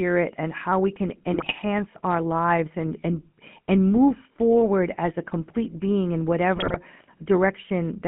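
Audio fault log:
throughout GSM full-rate codec. The speech has the buzzy, gravelly roughness of the original GSM phone codec, and the damage is plainly audible. The codec rebuilds the voice by driving a vocal-tract filter with sparse, regularly spaced pulses. Much of the fine excitation detail is thrown away, which leaves the grainy texture. The sound is confined to a telephone band of about 150 Hz to 3.4 kHz, so it is thin and lacks brightness. All of this fits a coder running at around 13 kbps.
1.32–1.53 s and 6.56–6.77 s GSM bit errors. There are two short bursts of squawking, popping and gargling. The first comes right after "and how we can", just before "our lives and and". The second follows "a complete being in". The second burst is heavier than the first. Corrupted bits reach the decoder's filter, pitch and gain values, so each damaged frame comes out with a warped spectrum or a sudden level jump.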